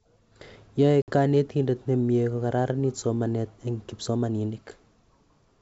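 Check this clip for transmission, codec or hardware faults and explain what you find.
One fault stands out in this G.722 wideband call: packet loss on an ADPCM call, 1.02 to 1.10 s. About 60 ms, roughly three packets, becomes silence. The decoder's predictor and step size then mismatch the sender's, so speech returns slightly distorted before settling. The waveform shows a flat gap with a jagged restart, and the spectrogram a blank vertical stripe.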